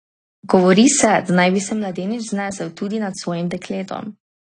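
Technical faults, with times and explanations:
throughout: AAC compression. The speech was likely passed through a low-rate AAC-LC encoder, with the damage plainly audible and pointing to a bitrate around 32 kbps. Short of bits, the encoder quantised each frame's frequency lines coarsely and discarded everything above 10.2 kHz, so the top of the spectrum is simply missing. The sound is dull and smeared, sibilants turn thin and fizzy, and sustained sounds pick up a warbling texture.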